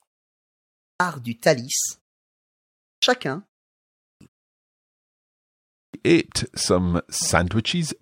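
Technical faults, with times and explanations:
0.52–1.00 s, 2.51–3.03 s, 3.73–4.21 s, 4.83–5.38 s and 5.45–5.94 s: clipped start after a pause. In each silent gap of 0.3 to 0.6 s the output drops into sleep, and it needs about half a second to wake, so every restart of speech pops in abruptly with its opening sounds missing.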